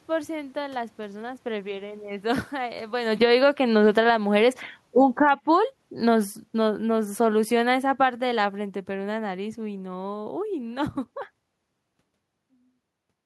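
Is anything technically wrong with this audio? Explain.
Yes. The automatic gain control in this speech clip keeps hunting, pulling the level down and pushing it back up.

Automatic gain falling runs from 2.26 to 4.29 s, lowering the gain by about 9 dB, and again from 4.83 to 10.95 s, by about 12 dB. The control judged the input too loud and eased its gain down. Unlike a talker moving back, the room noise sinks along with the voice.

Automatic gain rising overlaps these, from 3.37 to 4.7 s by about 6 dB and from 5.4 to 5.95 s by about 8 dB. Here the control judged the input too quiet and raised its gain, so voice and background swell together. The level changes around 3 s and 12 s are the talker moving, and there the room noise stays put.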